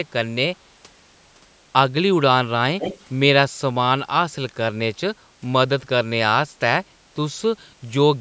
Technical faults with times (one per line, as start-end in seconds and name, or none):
2.79-3.03 echo leak